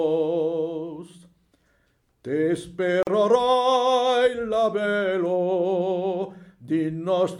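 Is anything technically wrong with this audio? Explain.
Yes. At 3.03 s there's a gap at a join of encoded pieces: a break of about 42 ms, where the encoder's start delay and end padding were left untrimmed, then the sound just picks up again.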